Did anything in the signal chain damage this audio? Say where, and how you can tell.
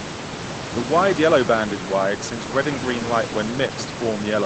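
No, nothing in the chain has damaged this speech; the room noise sits about 10 dB below the speech as part of the recording, and the call path's codec limits the band to about 8 kHz, which fits Opus at around 20 kbps.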